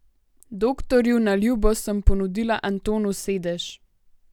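No technical faults are audible.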